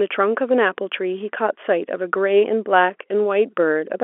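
Telephone speech carried over G.711 mu-law at 64 kbps, confined to the usual 300 Hz to 3.4 kHz line band, with no technical faults present.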